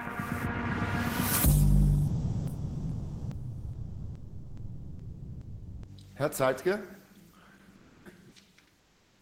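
Sound dropped by the voice detector, 2.07 to 5.87 s: the sound gives way to steady noise for about 3.8 s, likely because the sender's detector judged it background and stopped transmitting. Comfort noise in place of the background, 7.75 to 8.05 s and 8.79 to 9.22 s: during pauses the real background, about 36 and 39 dB below the loudest sound, becomes featureless synthetic noise, about 2 dB louder and then about 3 dB quieter. This likely comes from discontinuous transmission, which fits Opus DTX.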